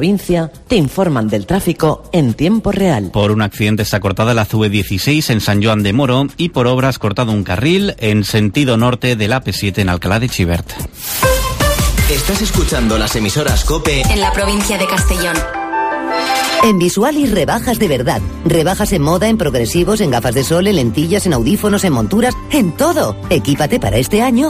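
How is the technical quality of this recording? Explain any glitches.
Nothing stood out as a technical problem on listening, so there are no glitches to explain.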